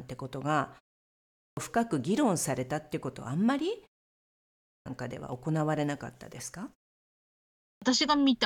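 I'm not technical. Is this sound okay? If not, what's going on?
No. There's a clipped start after a pause at 1.1, 4.39 and 7.36 seconds. Each time, after a brief silence of under a second, the playback device seems to doze off and needs a moment to wake up. Roughly the first half second of sound (about 0.47 s) is lost. The speech then jumps in abruptly, missing its opening sounds.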